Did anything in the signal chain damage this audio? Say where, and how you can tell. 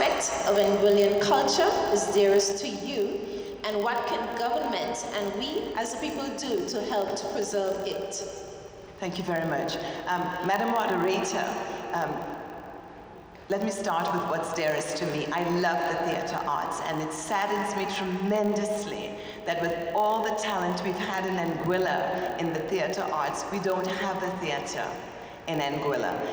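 Yes. There's a filter restarted on every block: a steady 50 Hz buzz runs through the whole clip and rises and falls with the sound's level. Some filter in the processing or buffer stage is dropping its state and starting each 20 ms block cold.

There's also a sudden gain jump at 2.52 s, where the sound and the background noise both fall by about 5 dB at once and stay down to the end. That's likely a gain setting applied instantly rather than ramped.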